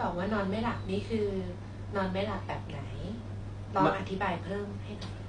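Transcoding between lossy codecs runs through this whole speech clip, from start to finish. Nothing is present above 10 kHz, and the two codecs' artefacts are heard together: the smeared, watery texture of a low-rate AAC encode sits under the synthetic, swishy highs of spectral band replication. That mix fits a likely chain of AAC-LC at about 32 kbit/s followed by HE-AAC at the same rate, with the second encoder spending its limited bits reproducing the first one's damage.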